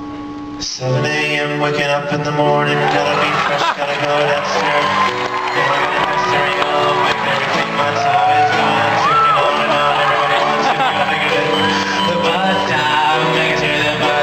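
Nothing stood out as technically wrong on listening to this audio.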